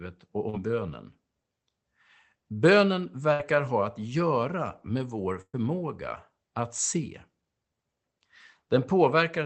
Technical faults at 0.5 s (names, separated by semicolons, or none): short concealed packet loss